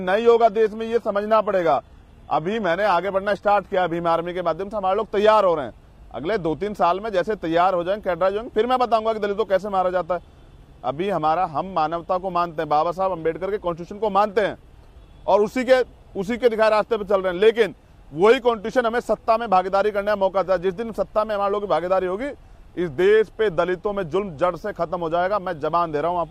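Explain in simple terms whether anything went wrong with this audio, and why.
An adaptive stream starting at a low bitrate affects the first 4 seconds. To start playing quickly, the player began with a thin, heavily compressed version, so the top end sounds dull or artificial. At 4.0 s it switches to a fuller version, and the sound suddenly clears without any gap.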